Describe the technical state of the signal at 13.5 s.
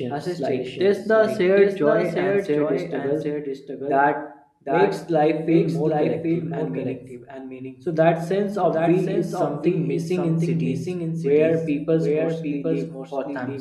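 At 13.5 s you're still hearing the doubled audio track that runs through the whole clip. A second, full-band copy of the speech trails the original by roughly 0.7 s, sitting a few dB lower, around 5 dB down. It's most likely a second capture through a slower path getting mixed back in. There's no decay or room colour on it, so it sounds like a dry, slightly quieter overlap rather than an echo.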